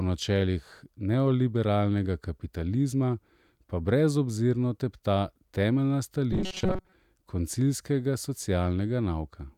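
From 6.33 to 6.92 s the speech collapses into robotic sound from repeated short buffers: a rigid, metallic 188 Hz buzz that still loosely tracks the syllables. Roughly 70% of that stretch is likely a tiny 5.3 ms slice looped while fresh audio lagged, which sets the fixed pitch. Unlike a simple dropout, nothing falls silent.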